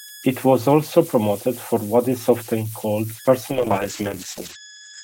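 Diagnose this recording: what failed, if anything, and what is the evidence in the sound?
The converter stage produces idle tones throughout. A whistle around 1.5 kHz sits in the pauses and turns grainy under quiet speech, at about 19 dB below the signal. Unlike mains hum, it is a single offset-dependent tone from an undithered delta-sigma modulator cycling bit patterns.

A call bitrate drop hits the codec from 3.53 s to the end. The speech turns rough and watery as bandwidth narrows from 20 kHz to 8 kHz, which fits the encoder falling from about 32 to 9 kbps. Unlike a simple low-pass filter, this brings coarse quantisation artefacts along with the lost top end.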